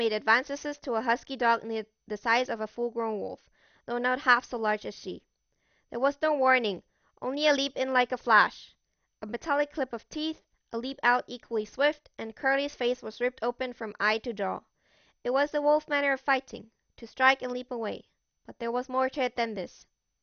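Speech with MP2 compression damage throughout: nothing above 6.5 kHz, a dull top, and gurgling granular artefacts as sub-bands drop out, likely from low-bitrate MPEG Layer II encoding consistent with about 48 kbps.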